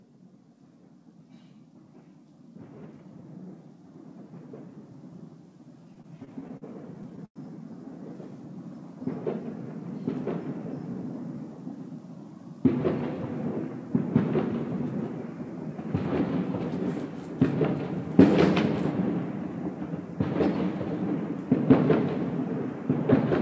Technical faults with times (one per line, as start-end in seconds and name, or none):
5.86-7.38 repeated stalls (stutter)